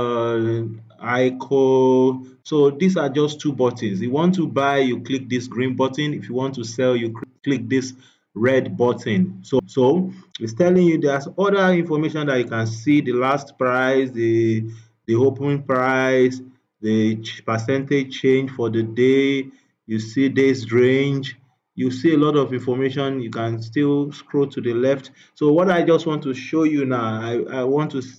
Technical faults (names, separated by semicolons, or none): CD skip